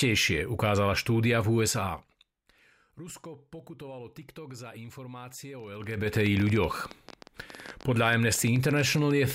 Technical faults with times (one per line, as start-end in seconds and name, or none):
5.60-9.31 train of clicks
5.72-6.14 zipper noise